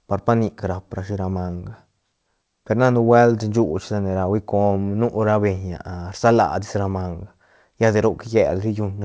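No technical faults can be heard in this speech clip. It has passed through a WebRTC call path, and the lack of any content above 8 kHz fits a wideband codec such as G.722.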